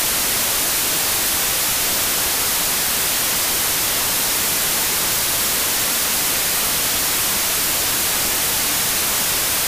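A wrong sample width affects the whole clip. The speech was stored as 32-bit integers but is read back as 16-bit integers. Each stored sample splits into two values. One holds the top bits of the real signal. The other holds its low bits, which behave like random numbers. The result is loud hiss with the speech buried inside. Twice as many values come out, so everything plays at half speed, an octave low.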